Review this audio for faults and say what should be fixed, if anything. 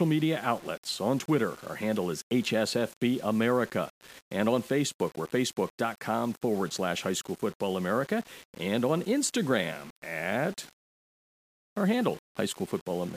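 The speech was most likely requantised to about 6 bits by plain rounding, with no dither, throughout the clip. The error tracks the signal at roughly 25 dB below it, so quiet syllables turn gritty, and the faintest passages sputter or drop out. Keep at least 16 bits through processing, and add dither whenever reducing bit depth.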